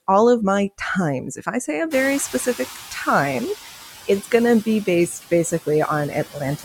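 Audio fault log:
throughout: noise suppressor artifacts. The suppressor pulls the steady background down by about 8 dB frame by frame, so the noise dips in the gaps and swells back under the talking.
1.9 to 3.55 s: noise suppressor catching up. Right after "I say a", the room noise jumps by about 23 dB around the 2 s mark, and the suppressor's estimate lags. It comes through with less reduction at first, then sinks over 1.65 s to about 8 dB of cut by "it's going to be".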